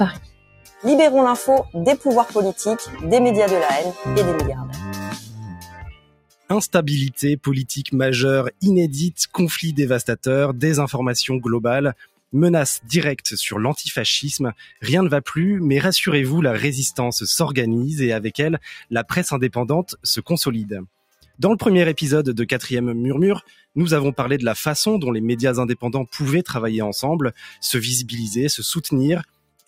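A noise suppressor built for speech has been left running on this audio, and it's treating sustained material and ambience as noise. Across the clip the level keeps swinging by around 10 dB as the processor clamps down and lets go. Transients punch through fine, but anything held or decaying gets pulled back, so you hear pumping and a thinned-out, fluttery texture instead of natural tails. On top of that, there are specific spots where the suppressor cut the sound harder than the rest, dropping it by about 21 dB at worst: 0.12 to 6.5 s (the longest, with a few seconds of it affected in total), 11.95 to 12.9 s, 14.6 to 14.83 s (about 16 dB), 19.89 to 21.4 s, 23.41 to 23.76 s, 27.33 to 27.62 s (about 17 dB), and 29.24 s to the end. In each, steady or fading content sinks or has its decay chopped short while sudden attacks mostly survive.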